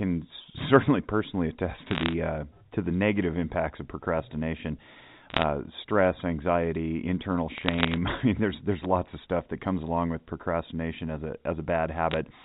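Speech carried over a G.711 A-law telephone path, band-limited below 4 kHz, with bursts of bit errors on a digital phone line at 1.88–2.13 s, 5.30–5.43 s, 7.54–7.96 s and 12.11–12.17 s. Each flipped bit corrupts a single 8-bit sample. Hits on the sign or upper bits produce sharp ticks, which cluster into crackle over the speech. The error density suggests a rate under one percent, heaviest in the earlier bursts.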